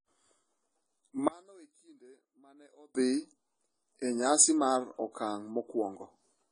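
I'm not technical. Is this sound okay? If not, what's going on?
No. The whole clip sounds dull and smeared, with nothing above 10 kHz. That is likely AAC compression squeezing the file too hard.

From 1.28 to 2.95 seconds the speech nearly vanishes. That is likely one channel inverted, so the two sides cancel when combined.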